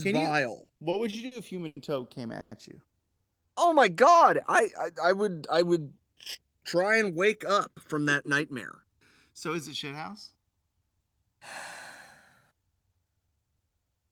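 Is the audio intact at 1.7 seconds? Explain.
No. The speech drags and stutters there, inside repeated stalls between 0.65 and 1.78 s: six gaps totalling 210 ms, longest 90 ms, were filled by extending the preceding sound when the jitter buffer ran dry.

Throughout, the channels drift apart. Summed to mono, the sound has a slow flanging sweep because the two devices' clocks differ by around 150 ppm, growing the inter-channel delay to roughly 1.5 ms by the end.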